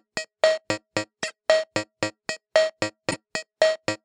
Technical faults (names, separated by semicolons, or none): corrupt frame decoded